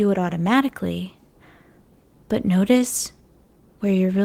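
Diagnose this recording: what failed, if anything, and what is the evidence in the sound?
The failure sits in the network receiver's jitter buffer. Clock drift between sender and receiver runs through the whole speech clip. The sender's clock is slow, by roughly one and a half percent. The buffer keeps draining, so the receiver must fill the shortfall.

Repeated timing corrections are heard from 0.20 s to 3.55 s. Playback there runs at 98% speed, with small, unevenly spaced hiccups. The receiver repeats short pieces, always lengthening, adding around 70 ms overall.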